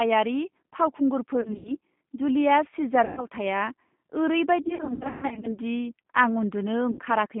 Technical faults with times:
0.00-7.40 G.729 codec
1.41-1.72 VoIP packet loss concealed by the speech codec
3.05-3.26 VoIP packet loss concealed by the speech codec
4.63-5.59 VoIP packet loss concealed by the speech codec
6.91-7.01 VoIP packet loss concealed by the speech codec

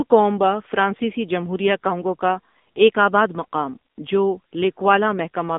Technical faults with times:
0.00-5.59 AMR narrowband mobile codec

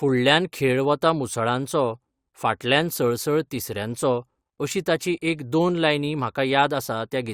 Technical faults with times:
none

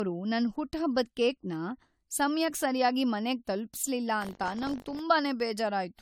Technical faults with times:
0.00-6.01 generation loss
4.20-5.01 buffer tearing

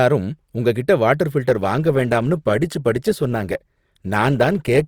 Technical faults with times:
1.48-4.87 adaptive stream at a lower bitrate

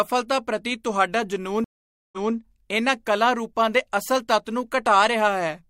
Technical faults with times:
1.64-2.34 stream reconnect

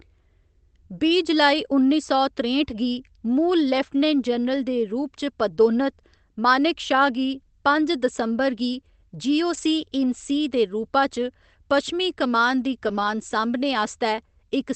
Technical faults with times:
5.55-5.59 short concealed packet loss
9.53-9.63 lost packet rebuilt from error correction
12.87-13.09 lost packet rebuilt from error correction

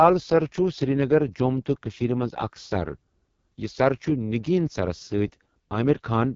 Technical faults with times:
0.00-6.35 AMR wideband (HD Voice) codec

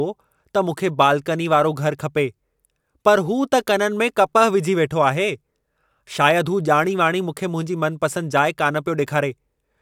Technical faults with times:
none

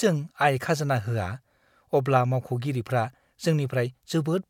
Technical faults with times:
none

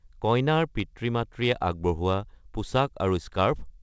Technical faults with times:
none

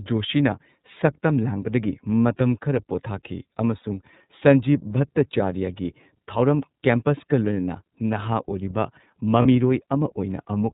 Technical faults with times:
0.00-10.73 iLBC codec
3.81-3.84 lost iLBC frames
9.42-9.46 lost iLBC frames

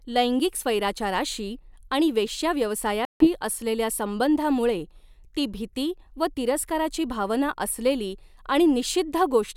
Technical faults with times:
3.05-3.29 Bluetooth dropout

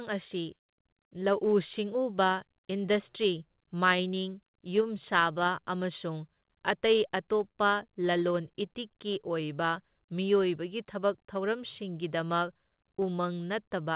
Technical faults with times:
0.00-13.96 clock drift between sender and receiver
0.14-13.84 repeated timing corrections
7.51-7.56 short stall from a late packet

